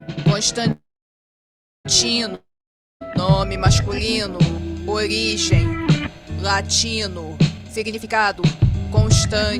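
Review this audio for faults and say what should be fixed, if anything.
From 0.71 to 1.87 s there is a call audio freeze. The last sound is stretched into a fading fill, then about 1.03 s of silence. The audio resumes exactly where it stopped. Nothing is lost, but the delay grows by 1.13 s. Packets were likely held up in transit until the jitter buffer ran dry. A larger adaptive jitter buffer and better network prioritisation would prevent this.

From 2.35 to 3.03 s there is a long network dropout. The last sound fades out, and about 0.56 s of silence follows. When the audio returns, about 0.66 s of it is missing. No packets likely arrived for that stretch. Stronger packet loss protection, such as redundancy or forward error correction, would prevent this.

From 7.58 to 8.74 s there is a jitter buffer speed-up. The audio plays at 147% speed with unchanged pitch and sounds rushed. Roughly half a second is removed as many short pitch-period slices. 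The buffer had overfilled and was draining its excess. Smoother network delivery and gentler buffer adaptation would prevent this.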